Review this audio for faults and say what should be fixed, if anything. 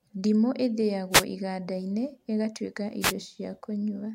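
Two short bursts of static break through the speech, from 1.11 to 1.24 s and again from 3.00 to 3.13 s, each lasting roughly an eighth of a second. These are wireless microphone noise hits: the radio link of an analogue FM system fades momentarily as reflected signals cancel the direct one, so the receiver's own noise rises and briefly swamps the voice, producing a quick swish of hiss. To prevent it, use diversity receivers with antennas kept in clear line of sight to the transmitter.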